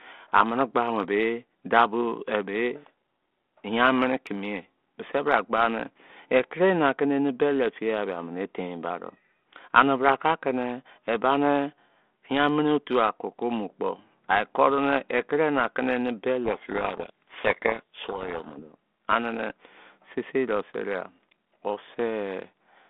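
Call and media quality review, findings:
Codec payload misread, 16.44–18.63 s: decoder unpacking G.726 code words in the wrong bit order, which buries the speech in harsh distortion until the packing realigns.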